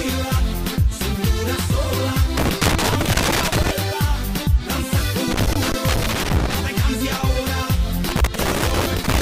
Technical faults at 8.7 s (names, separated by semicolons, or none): loose connector crackle